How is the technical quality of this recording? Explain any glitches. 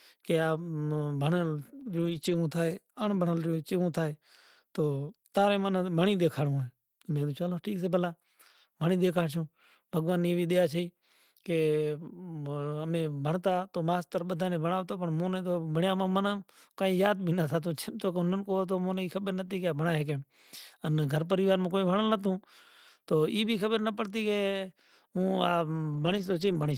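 Three short glitches affect this speech recording. All are lost packets rebuilt from error correction, at 1.81 to 2.35 s, 19.47 to 19.49 s, and 25.93 to 26.71 s. Packets went missing, and the decoder played low-bitrate copies carried in the packets that followed. So nothing drops out. Those stretches sound rougher and noisier instead.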